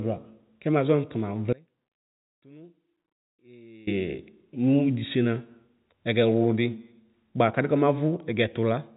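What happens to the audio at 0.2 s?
Nothing goes wrong at 0.2 s: the speech there is intact, carrying only the narrow, telephone-band sound of G.711 coding, with nothing above roughly 3.8 kHz.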